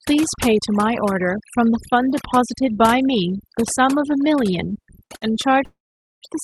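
Throughout the speech, overdone noise removal leaves a lowered background with twinkling specks and cuts away quiet parts of the voice.

At 5.06 to 5.13 s and 5.16 to 5.33 s, a short stall from a late packet holds a sound for about 34 ms and then 56 ms. The speech resumes where it stopped, with a slight buzz or dip.

From 5.65 to 6.25 s, a call audio freeze inserts about 0.57 s of fading buzz or hiss, mostly silence (about 0.45 s). It was likely caused by delayed packets emptying the jitter buffer. The call codec's roughly 12 kHz top end points to Opus.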